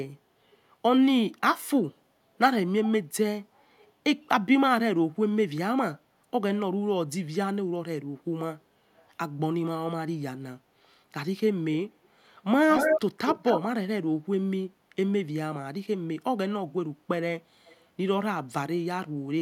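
Delayed speech repeats at 3.79, 12.71, 13.27 and 17.67 s, faint, then as loud, then faint, lagging 298 then 230 ms: echo leak, likely an incomplete loudspeaker echo cancellation.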